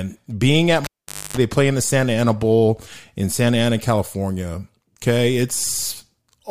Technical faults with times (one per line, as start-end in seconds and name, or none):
0.84-1.37 cable pulled and plugged in